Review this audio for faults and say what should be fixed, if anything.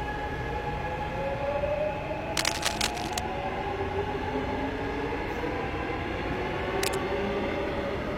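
Cable scratch noise at 2.37–3.20 s and again at 6.78–6.95 s: dense, uneven bursts of scratching, the first roughly as loud as the sound itself, the second a little quieter. A worn cable or connector being moved likely caused them, its contact resistance fluctuating rapidly. Replace or reseat that cable and connector, and secure it so it cannot shift during recording.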